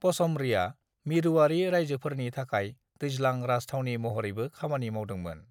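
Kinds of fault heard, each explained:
No faults detected anywhere in the speech recording.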